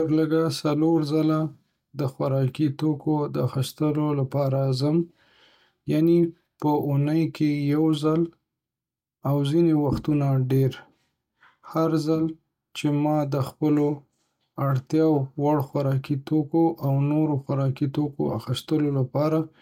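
No technical faults occur at any point in the recording.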